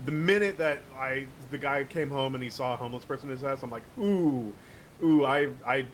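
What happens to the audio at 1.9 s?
Nothing goes wrong at 1.9 s; the speech carries on intact through that moment.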